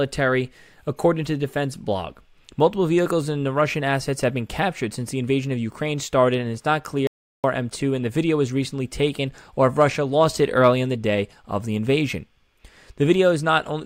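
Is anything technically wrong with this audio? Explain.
Yes. From 7.07 to 7.44 s, right after "and it's not clear", there is an audio dropout to silence lasting about 0.37 s, likely from the input briefly disconnecting while the recorder kept writing silence. Unlike a natural pause, the room tone vanishes entirely, and the speech resumes mid-flow.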